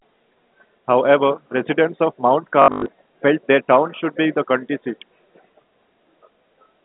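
From 2.62 to 2.86 s, just before "felt their town should", there is packet loss with last packet repeated. About 180 ms is lost, the longest run 100 ms. A 50 Hz buzz fits 20 ms packets. It stutters robotically.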